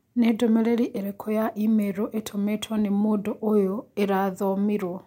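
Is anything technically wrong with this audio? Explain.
No, nothing is technically wrong with this audio.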